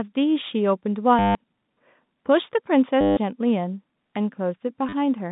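Packet loss with the last packet repeated breaks the speech at 1.19 to 1.35 s, 3.01 to 3.17 s and 4.89 to 4.93 s. The receiver loops stale audio over each gap. The repeats build a robotic buzz near 100 Hz, which fits 10 ms packets. The G.711 telephone band frames all of it.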